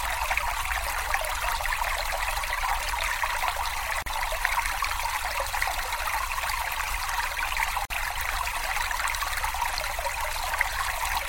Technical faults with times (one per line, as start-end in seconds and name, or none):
4.02-4.06 gap at a join of encoded pieces
7.85-7.90 gap at a join of encoded pieces